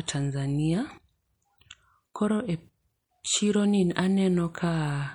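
MP3 compression damage runs throughout this speech clip, plainly audible from start to finish. The sibilants turn watery and swirly as weak detail flickers in and out, which fits a bitrate of around 64 kbps, likely from MP3 encoding.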